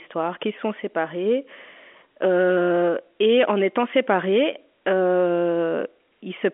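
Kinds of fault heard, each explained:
Nothing faulty can be heard anywhere in this speech.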